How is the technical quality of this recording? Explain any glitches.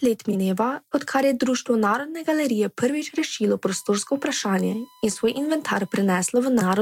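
The recording has two distinct technical faults: a brief reordering glitch near the start and a steady electrical whine through much of the second half.

Frames out of order, 0.30 to 0.35 s: two adjacent blocks of roughly 21 ms each, a length that fits a 1024-sample frame at 48 kHz, were decoded in swapped order, so this short stretch of speech plays with its halves exchanged. It sounds like a quick garbled flutter. On a waveform, the envelope jumps abruptly at the boundaries. On a spectrogram, the harmonics break and resume out of sequence without any gap in time.

USB whine, 3.71 to 6.30 s: current drawn by the USB bus in 1 ms frames leaks into the audio through shared power or ground. The result is a thin, fixed-pitch 1 kHz tone sitting roughly 35 dB below the speech. On a spectrogram it shows as a flat horizontal line at 1 kHz. In the waveform it appears as a faint periodic ripple during silences.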